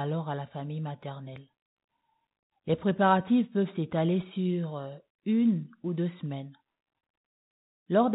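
No technical faults are audible.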